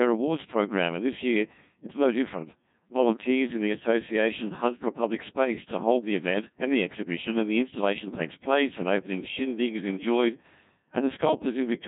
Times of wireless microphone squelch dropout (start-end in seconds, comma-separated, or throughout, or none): none